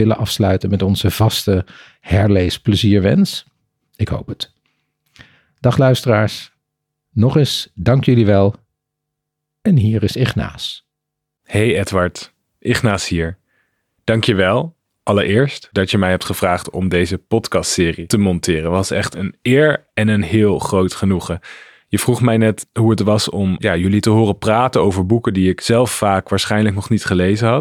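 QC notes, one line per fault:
No technical faults are present anywhere in the speech recording.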